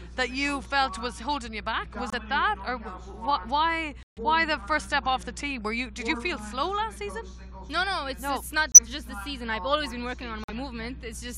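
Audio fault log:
2.10 s, 4.03 s, 8.72 s and 10.44 s, corrupt frame muted: the sound cuts abruptly to silence for about 40 ms, 170 ms, 70 ms and 65 ms, then resumes on time. Damaged compressed frames were rejected by the decoder and replaced with silence, each gap spanning two to seven frames.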